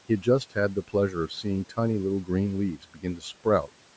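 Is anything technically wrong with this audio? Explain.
Yes. Between 2.83 and 3.23 s the speech sounds swallowed, with parts of it sinking toward the background for around a fifth of a second in total and losing up to about 12 dB at the deepest point. This is speech cut by the noise suppressor: the call's suppression stage misjudged those quieter speech moments as noise and turned them down along with the room noise, which sits about 24 dB under the speech.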